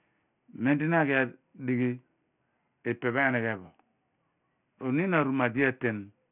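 A speech clip with aliasing from start to finish. The band stops hard at 3 kHz, and energy piles up right against that edge. Content that once sat above 3 kHz has folded back below it at wrong, unrelated pitches, so sibilants sound gritty and metallic. The folded energy sits roughly 20 dB under the speech. That points to the audio being resampled down to a 6 kHz rate without an anti-aliasing filter first.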